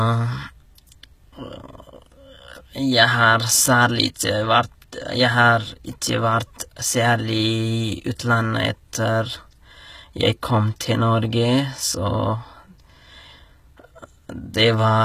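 A speech recording carries HE-AAC compression damage from start to finish, and it is plainly audible. The upper spectrum sounds synthesized rather than captured: s sounds come out gritty and lispy, with a metallic sheen, because the treble has been rebuilt from copied lower bands whose harmonics no longer line up with the real ones. The likely cause is spectral band replication at a very low rate, consistent with roughly 20 kbps.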